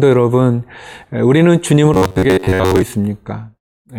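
From 1.94 to 2.82 s the speech turns into robotic sound from repeated short buffers: a rigid metallic buzz near 94 Hz, likely from a roughly 11 ms buffer replayed for most of the stretch.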